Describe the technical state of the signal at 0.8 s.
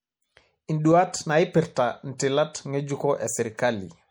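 At 0.8 s, as throughout the clip, MP3 compression is at work, likely an encode starved of bits in a way that fits about 64 kbps. The encoder switches weak frequency lines on and off between frames, so the speech sounds plainly watery and swirly, with smeared onsets.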